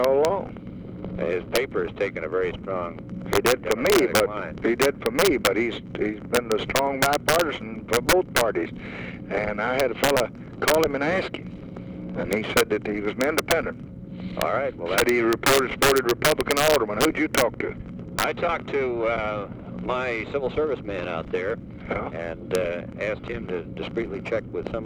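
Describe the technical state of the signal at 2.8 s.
At 2.8 s the integer overflow running through the whole clip is present. Peaks driven about 6 dB past the limit wrap to the opposite sign, giving sharp, violent cracks.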